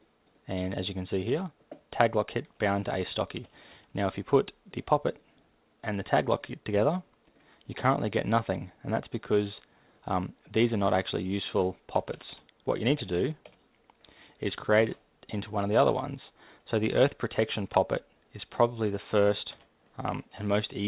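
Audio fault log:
No faults heard; call path band-limited to 4 kHz as expected.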